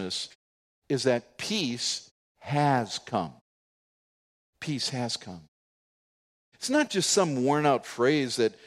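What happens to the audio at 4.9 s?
At 4.9 s the speech plays through intact, with no dropout, click or distortion at that moment.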